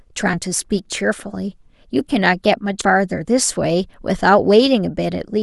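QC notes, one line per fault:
0.33–0.37 s, compressed frames skipped: the speech jumps forward by roughly a tenth of a second, which fits about five 20 ms frames dropped as missing or rejected.
2.81–2.86 s, compressed frames skipped: a second forward jump of around 70 ms, consistent with about four missing 20 ms frames.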